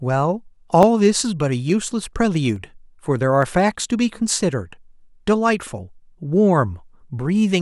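Speech, with a regular click running through it. Clicks recur every 0.864 s, from 0.83 s to 6.88 s, about seven in all. These are clock drift buffer slips. Two independent clocks likely disagree by a few hundred parts per million, so a small block of samples, around fifteen, is dropped or repeated at each slip.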